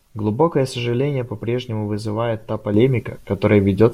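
At 2.74 s a sudden gain jump lifts speech and noise floor by about 6 dB, likely an unramped gain change; the waveform steps up.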